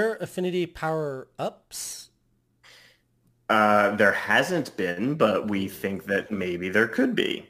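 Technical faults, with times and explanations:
Throughout, crude rate conversion: a gritty, inharmonic fizz rides on the speech, strongest on loud and bright sounds such as sibilants, and it follows the level of the speech. The sample rate was changed by simply picking the nearest existing sample, with no filtering. The pattern fits a 48 kHz to 44.1 kHz conversion. The timing errors repeat in a fixed cycle and add tones unrelated to the speech, sitting only about 25 dB below it.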